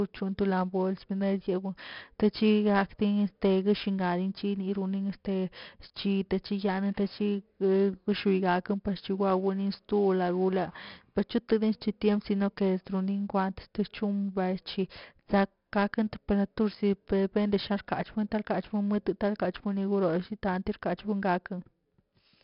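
The whole clip carries 4-bit ADPCM compression, and it's pretty heavy. Each sample is squeezed into a small step from a predicted value, so the leftover error turns into a gritty hiss that rises and falls with the speech, loudest on the strongest syllables, with some roughness on sharp onsets. Nothing comes through above about 5.3 kHz, which dulls the top end and fits a low sample rate at around 44 kbps.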